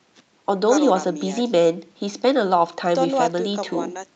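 Nothing in this speech stood out as a fault on listening.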